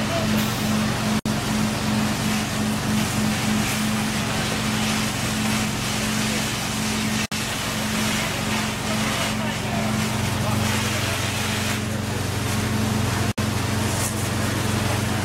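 Gaps at a join of encoded pieces open at 1.19, 7.26 and 13.32 s, each about 60 ms long with smeared edges, recurring every 6 s. The audio was encoded in separate pieces and joined untrimmed, so encoder delay and last-frame padding remain.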